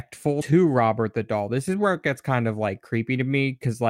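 Right around 0.40 to 0.42 s the speech lurches forward: that's compressed frames skipped. A run of encoded frames never got played, either missing from the stream or thrown out by the decoder as damaged, so the audio jumps ahead by about five frames, roughly a tenth of a second. The frame length works out near 21.3 ms.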